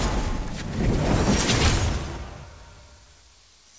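No technical faults can be heard anywhere in the clip. The audio has come through a call path whose band stops at 8 kHz, which fits a wideband codec such as G.722.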